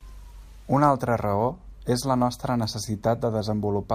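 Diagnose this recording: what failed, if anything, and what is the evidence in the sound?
Nothing failed: the sound of this speech recording gives no evidence of any fault.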